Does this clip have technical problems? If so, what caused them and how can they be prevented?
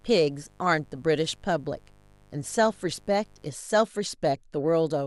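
Yes. Mains buzz runs from 0.0 to 3.44 s: a raspy buzz built on 50 Hz harmonics reaching into the kilohertz range, sitting well below the speech, about 35 dB down. Switching spikes from a dimmer, rectifier or unshielded cable enter twice per mains cycle. Using shielded cabling and keeping dimmers and power supplies away from the signal path prevents it.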